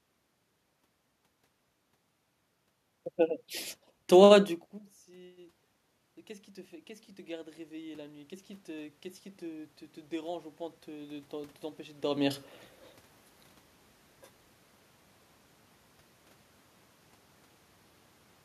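Automatic gain rising runs from 6.26 to 12.45 s in this speech recording. After the input level falls by about 24 dB, the gain control slowly lifts its gain by about 10 dB, so the voice and the room noise swell together over those six seconds rather than jumping. The level shifts near 4.5 s and 12 s sound like the talker moving relative to the microphone, not a system fault.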